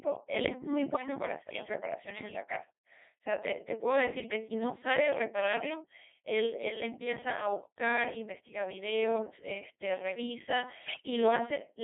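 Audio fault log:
Throughout: Codec 2 vocoder. The speech has the robotic, buzzy quality of a very low-rate parametric vocoder, consistent with a 2.4 kbit/s mode. Only pitch, voicing, energy and a coarse spectral envelope survive, and the decoder rebuilds the voice from a sum of sine waves, so fine waveform detail is gone. Codec damage is heavy, and the audio sits in a narrow line band of about 200 Hz to 3.6 kHz.
0.88 to 1.16 s and 10.84 to 11.06 s: bit errors on digital voice radio. In both windows the synthetic voice briefly breaks into warbles and bleeps, with abrupt jumps in pitch, level and tone colour. Corrupted bits in a low-rate vocoder stream damage the parameters of whole frames rather than single samples, and each burst spans several consecutive frames. The first burst has an error rate of roughly 7 percent, somewhat higher than the roughly 5 percent in the second.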